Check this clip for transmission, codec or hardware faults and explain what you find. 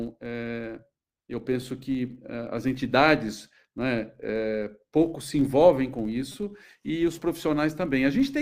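Two faults are present in this speech recording: a steady buzz caused by a filter restarted on every block, and two brief repeated-buffer glitches.

The filter restarted on every block runs for the whole clip. A filter in the chain loses its internal state at each block boundary and starts again from silence, so every block opens with a small transient. Those transients recur at about 93.8 Hz, which fits a 512-sample block, and are heard as a low, even buzz whose loudness rises and falls with the speech level. Its strict regularity separates it from the isolated buffer glitches.

The repeated buffer occurs at 1.62 s and again from 6.32 to 6.34 s. Both times, fresh audio arrived late and the device replayed its last 5 ms buffer rather than leaving a gap. At 1.62 s that buffer plays one extra time and gives a single click. At 6.32 s it plays four extra times, and the hard joins between copies form a short burst of buzz. 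Essentially no audio is lost, so this is not a dropout. Unlike the block-rate buzz, these are two separate events and do not follow the signal level.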